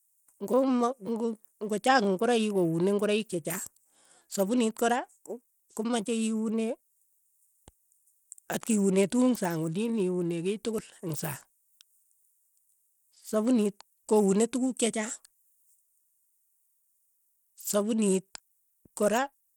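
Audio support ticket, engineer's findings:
Likely Bluetooth SBC compression, whole clip: coarse sub-band quantisation, consistent with a starved bit pool near 96 kbps, leaves plainly audible gritty noise on the speech; no content above 20.7 kHz.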